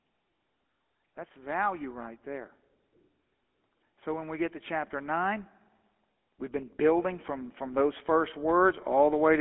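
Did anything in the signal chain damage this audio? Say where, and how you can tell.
Yes, the codec stage is the main culprit, all the way through. It has the buzzy, gravelly grain of the GSM full-rate codec, clearly audible, and the band sits at roughly 250 Hz to 3.4 kHz, which fits a 13 kbps full-rate stream. Its coarse pulse excitation is what roughens the speech.

Then there's automatic gain rising in the call processing, from 6.23 s to 9.36 s. Speech and background swell together by about 8 dB over those three seconds, because the gain control judged the input too quiet and slowly cranked it up. The mic's high-pass bass trim is normal.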